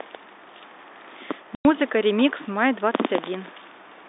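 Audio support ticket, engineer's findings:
Packet loss filled with silence, 1.55–1.65 s: 100 ms dropout with hard edges. Receiver played silence for missing packets, which fits ten 10 ms packets. Telephone-band G.711 line sound unaffected.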